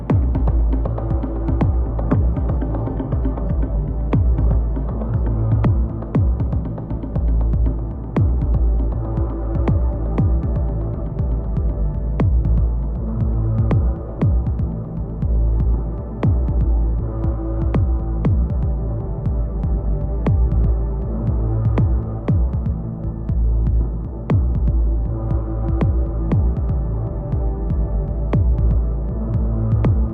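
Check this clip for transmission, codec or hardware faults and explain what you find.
One fault stands out: from 1.81 s to 5.81 s the sound abruptly loses its top end and takes on a thin, swirly, synthetic brightness, then snaps back to full quality, with no gap at either edge. This is an adaptive stream dropping to a lower bitrate. When the connection slowed, the player switched to a much leaner encoding for those four seconds. The character of the damage points to a shift from roughly 96 kbit/s AAC down to about 12 kbit/s HE-AAC.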